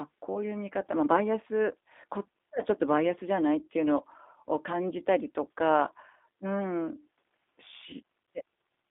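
A speech recording carried over a G.729 codec link. The whole clip sounds thin and slightly synthetic. The band runs from about 250 Hz to 3.6 kHz, so there is no air or sparkle above that. The codec rebuilds each short frame from a vocal tract filter, a pitch predictor and a few pulses. That gives the plainly audible roughness and synthetic texture heard throughout. The sound fits the 8 kbit/s G.729A variant. At 0.33 to 0.35 s there is a brief glitch from VoIP packet loss concealed by the speech codec. The decoder filled the gap, which points to a single lost 10 ms frame, by extending its last pitch and filter at lower gain. This leaves a short smeared patch of buzzy tone or coloured noise. Each frame depends on the one before it, so the sound stays weak or distorted for a moment after the gap before it recovers.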